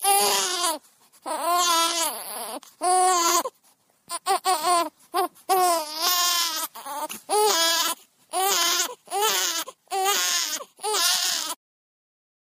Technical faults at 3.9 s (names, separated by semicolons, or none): MP3 compression